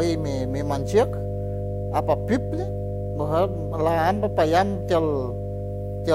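Mains hum runs under the speech from start to finish. It is a steady low tone at 50 Hz, with a few low harmonics above it. Power-line current is leaking into the signal path, most plausibly through a ground loop or a transformer sitting close to the cabling. The hum is strong, only a little quieter than the speech itself. It never stops or changes, so it is audible even between phrases.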